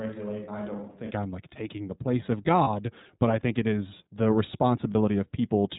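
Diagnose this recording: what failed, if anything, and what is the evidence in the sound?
Throughout, the speech is band-limited with nothing above 4 kHz, and it sounds slightly rough and synthetic. That is the iLBC codec at the storage or transmission stage. It codes each frame's excitation independently, and the damage is plainly audible. The sound fits its 13.33 kbps, 30 ms frame mode.

From the very start until 1.09 s, the voice is hollow and roomy, with thin bass and a level roughly 10 dB lower. Room noise sits only around 35 dB below the speech. At 1.09 s it snaps back to a close sound. This is likely a switch to a distant microphone, such as a camera mic standing in for a failed close one.

At 2.63–2.68 s and again at 4.92–4.95 s, the sound briefly turns into a held, faintly buzzy vowel. Each event is about 30 ms long, and clean speech resumes immediately. These are lost iLBC frames on the network path, each fitting a single lost 30 ms frame. 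The decoder concealed each gap by repeating the last pitch cycle blended with noise.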